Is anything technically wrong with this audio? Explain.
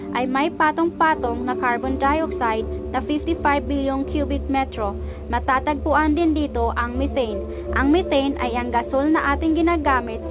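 No, nothing's wrong here; it just sounds like a normal phone-style call, with the G.711 A-law codec at 64 kbps leaving nothing above 4 kHz.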